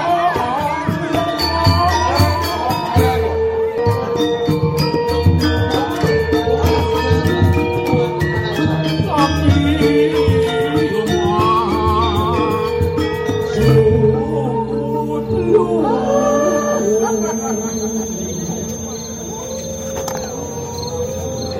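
From 15.99 s to the end, a thin, slowly swelling and fading 6.3 kHz feedback whistle sits about 15 dB below the sound, likely a speaker-to-microphone loop held just short of runaway.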